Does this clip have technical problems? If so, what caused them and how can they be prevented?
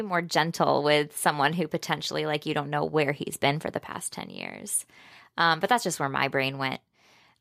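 No, this clip has no technical problems, so there is nothing to trace back to a cause or prevent.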